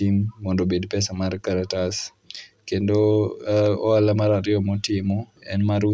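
No technical faults can be heard in this recording.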